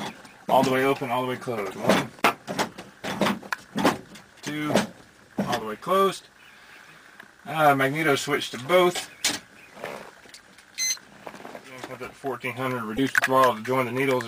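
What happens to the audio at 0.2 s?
Nothing goes wrong at 0.2 s; the audio plays through that moment intact, with no audible fault.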